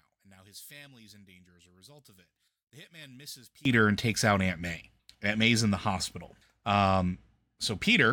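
Until 3.65 s, likely one channel inverted: summing cancels the speech to a faint residue about 25 dB down, recovering at "and takes out".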